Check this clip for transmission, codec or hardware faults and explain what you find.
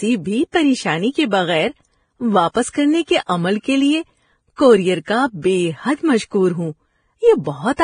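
One codec fault runs through the whole clip. Transcoding between lossy codecs, from start to finish: the speech stops dead at 9.7 kHz, and two different kinds of coding artefact are heard stacked together. This fits a low-rate Vorbis encode that was likely re-encoded to MP3 at roughly 48 kbit/s. The second encoder spent bits reproducing the first one's damage and added its own artefacts.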